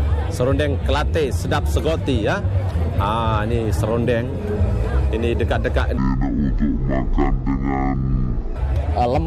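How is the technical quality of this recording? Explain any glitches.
There's one clear glitch. From 5.97 to 8.56 s, stereo is read as mono: interleaved left-right samples run as one channel, so sound drops to half speed, an octave low, with a faint mirrored image up top.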